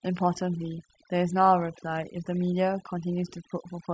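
From start to finish the speech carries overdone noise removal: a heavy-handed denoiser has pulled bands near its noise estimate right down, taking quiet speech detail with them. Unlike plain band-limiting, the gaps between phrases twinkle with isolated specks.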